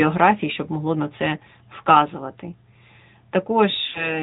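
Throughout, the speech carries plainly audible AMR narrowband mobile codec damage. The 8 kHz sampling removes everything above 4 kHz, and the vocal tract model gives the voice a buzzy, synthetic edge, which points to a mid-rate AMR-NB mode around 10 kbps.

Lost AMR speech frames occur twice. At 1.38 to 1.42 s, just after "щоб могло на це", a brief dip or warble is consistent with one failed frame. The decoder reuses the last good pitch and vocal tract settings at falling gain, and the voice returns weak or rough for a moment. At 3.88 to 4.18 s, a longer gap consistent with about three lost frames smears the sound out before it fades toward silence.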